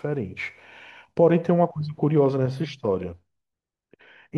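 Nothing in this bit of speech stands out as a technical problem; there's nothing to flag anywhere along the way.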